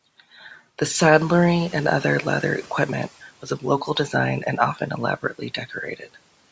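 From 1.15 to 3.19 s, the noise suppressor catches up: after room noise jumps about 13 dB near 1 s, it passes through, then sinks about 10 dB once, unlike repeated pumping.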